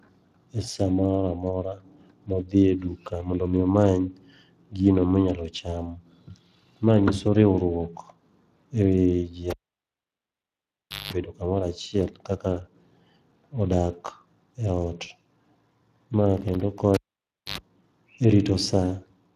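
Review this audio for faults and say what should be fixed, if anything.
Speex codec, throughout the clip: the speech carries the hoarse, grainy texture of a CELP coder that lacks enough bits to rebuild the excitation faithfully, so voiced sounds come out rough and noisy rather than clean. The damage is plainly audible, and the character fits a rate somewhere around 22 kbps, with nothing above 15.3 kHz. To prevent it, record or transmit with a modern codec such as Opus at a generous bitrate, or keep an uncompressed master.

Cable pulled and plugged in, at 9.50 to 11.13 s and again at 16.94 to 17.58 s: each event opens with a pop as the live connector breaks contact, then the signal drops to near silence, about 1.57 s the first time and about 0.59 s the second. A short burst of 50 Hz mains buzz follows, lasting about 0.19 s and then about 0.09 s, while only the plug tip touches. A second pop marks the signal's return. 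To prevent it, mute the channel before re-patching and secure cables so they cannot be tugged loose.

Processor overload crackle, at 16.37 to 16.79 s: for under half a second the audio tears into a gritty crackle. The machine was missing its processing deadlines repeatedly, and each missed buffer was replaced by a hard-edged slice of silence. The spacing suggests buffers of roughly 5 ms and around ten misses, which stitch together into the rough burst. To prevent it, raise the audio buffer size or reduce the CPU load during recording.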